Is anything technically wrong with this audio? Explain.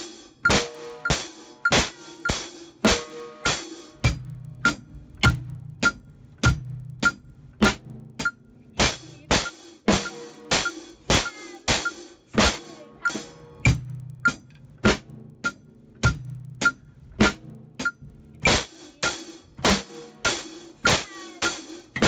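Yes. Throughout the clip there is a resampler restarted on every block: each 50 ms block is converted independently, likely from 16 kHz to 48 kHz, leaving edge errors heard as 20 Hz ticking whenever sound is present.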